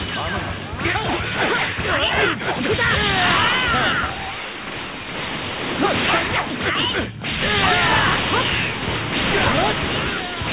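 No faults detected at any point in the audio.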